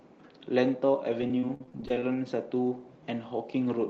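From 1.21 to 2.02 s the speech turns choppy and robotic: repeated packet loss, with well over a dozen short holes, the longest about 32 ms. Each one is papered over by stretching the previous sound, so over a quarter of that stretch is concealment.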